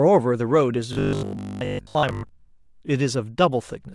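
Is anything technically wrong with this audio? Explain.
Yes. From 0.93 to 2.29 s there's robotic sound from repeated short buffers: a rigid 50 Hz buzz, likely from re-playing the last 20 ms while most new audio is missing.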